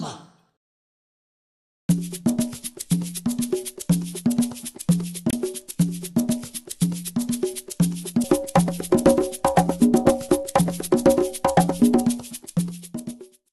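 Damaged data in a compressed stream shows up three times: from 0.46 to 0.50 s, from 5.30 to 5.33 s, and as a very brief blip at 8.24 s. At each point the decoder hits corrupted bytes, misreads the frames there, loses sync and has to hunt for the next valid frame header. What comes out is a short chirp or squawk of garbled output, lasting about 30 to 40 ms in the first two cases and only a few milliseconds in the last.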